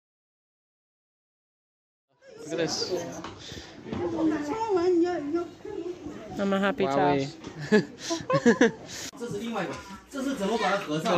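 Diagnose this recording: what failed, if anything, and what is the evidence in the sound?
Nothing stood out on listening, and the smooth fade-in that reaches full level at about 3.03 s, starting from around 2 s, comes up gradually with no click or hard edge.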